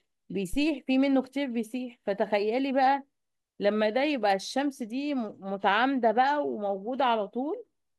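Speech recording with a phantom power thump from 0.53 to 0.71 s: a supply step through the coupling capacitors gives a deep thump peaking near -23 dBFS, decaying in 39 ms.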